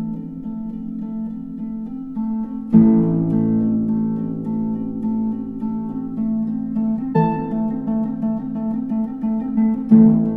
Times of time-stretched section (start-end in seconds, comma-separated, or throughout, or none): 6.88-10.36